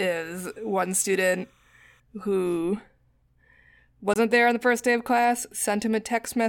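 Linear timecode running at 29.97 frames per second leaks in from a neighbouring line from 0 to 2.0 s, adding a faint chirping warble between roughly 1 and 2 kHz, about 40 dB below the speech. At 4.14 to 4.17 s, a corrupt frame is muted: a damaged compressed frame was rejected and replaced with silence, leaving an abrupt 32 ms hole, about one frame long, just before "there on the first".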